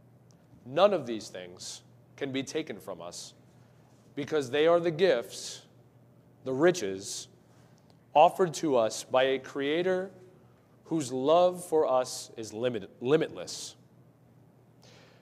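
No technical faults can be heard anywhere in the audio; the signal stays continuous and intact throughout.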